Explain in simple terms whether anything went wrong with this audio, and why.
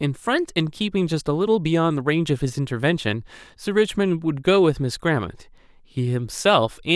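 Nothing went wrong here: the speech shows no dropouts, clicks, distortion or other faults anywhere in the recording.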